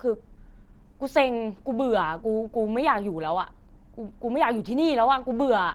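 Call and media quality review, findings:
Whole clip: speech muffled, hoarse and grainy, with plainly audible codec damage even though the band extends to about 20.3 kHz. This is likely Opus compression in hybrid mode, with a speech coder below and sparse, noise-filled upper bands, fitting a bitrate near 16 kbps.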